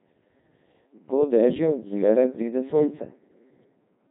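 From start to end, the speech has passed through a Codec 2 vocoder, heavily. The waveform itself is gone. Only pitch, voicing, energy and a rough spectral shape survive, rebuilt from sine waves. The voice sounds robotic and buzzy, which fits a 2.4 kbit/s mode. Nothing remains above 3.8 kHz.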